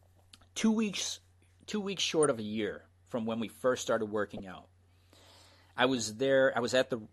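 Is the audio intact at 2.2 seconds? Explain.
No. A corrupt frame decoded from 2.23 to 2.25 s, between "weeks two weeks" and "of a year from": damaged bits in what sounds like a single compressed frame were decoded anyway, misplacing energy across frequencies and producing a brief chirp, squeak, blip or noise burst.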